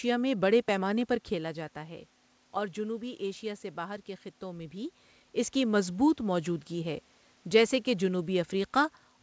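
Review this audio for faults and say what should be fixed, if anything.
Nothing stood out on listening, so there is nothing here that needs fixing.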